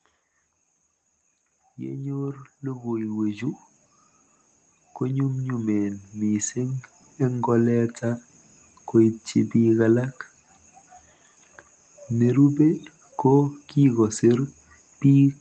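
A speech recording with automatic gain rising in two places. From 1.78 to 3.7 s the level creeps up by about 8 dB, and again from 4.8 to 8.31 s by about 7 dB. The gain control decided the input was too quiet and slowly turned itself up, so the voice and the room noise behind it swell together over a couple of seconds rather than jumping.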